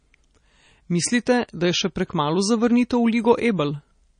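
Speech runs its whole length with plainly audible MP3 compression damage: the top end stops dead at 9.8 kHz, and the sound has a watery, swirling texture with smeared consonant onsets. The likely cause is an MP3 encoder starved of bits, which fits a low bitrate of around 32 kbps. Short of data, it discarded everything above that cut-off and dropped weak frequency components that flicker in and out from frame to frame.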